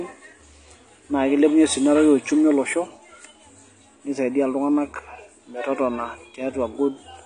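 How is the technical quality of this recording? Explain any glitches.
The recording is dull and smeared from start to finish, with nothing audible above about 9.8 kHz and a warbling, fizzy texture clinging to sustained sounds and sibilants in the speech. That pattern is the signature of AAC compression, likely AAC-LC at a low bitrate that fits around 32 kbps. Starved of bits, the encoder trims the top of the spectrum and coarsely quantises what remains, leaving gaps and noise-filled bands that smear detail and make the speech audibly degraded throughout.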